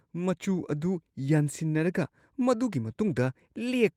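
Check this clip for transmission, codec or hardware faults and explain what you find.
One fault here, a lost packet rebuilt from error correction at 3.07 to 3.09 s, just after "ꯌꯥꯟꯁꯤꯟꯅꯔꯒ ꯃꯗꯨꯒꯤ". The next packet carried a low-bitrate copy, so there's no gap, just a rougher, noisier 20 ms patch.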